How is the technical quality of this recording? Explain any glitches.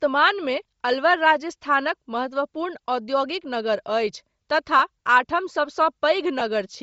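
The recording has audible codec damage throughout and two brief dropouts near the end.

Across the whole speech clip there is a breathy, grainy edge, with the upper spectrum thin and partly replaced by hiss-like fill. This is likely Bluetooth LC3 compression at a low bitrate, around 32 kbps with 7.5 ms frames, where the encoder zeroes high-frequency detail and the decoder substitutes noise.

At 4.79 s, and again from 6.39 to 6.42 s, the sound briefly turns into a short noisy smear, about 7.5 ms and 15 ms long. These are lost LE Audio frames, one and then two in a row. The decoder covers each gap by repeating the previous spectrum with randomised signs.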